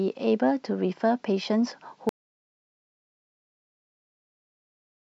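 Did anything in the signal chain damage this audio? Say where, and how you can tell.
Yes. At 2.09 s the speech cuts off mid-flow and the rest of the clip is an audio dropout to silence, with no room tone or noise floor at all. On a waveform the trace collapses to a flat line through to the end; a spectrogram shows a hard vertical edge followed by empty black. The cause is likely at the input stage, a lost device or link, while the recorder kept writing silence.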